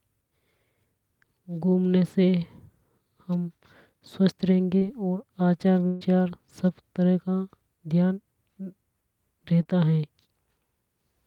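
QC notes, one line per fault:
4.77–4.83 s and 9.63–9.67 s: short concealed packet loss. About 40 ms, then 20 ms, of the call never reached the decoder in time. The receiver covered each hole by continuing the sound just before it, then blended back. Each is heard as a brief smear or wobble.
5.87–6.03 s: burst of packet loss. About 140 ms was lost in one run. The receiver stretched the last sound across the entire gap, turning it down as it went, so no silence is left. That sound is held and fades, then the speech resumes further on with that stretch missing.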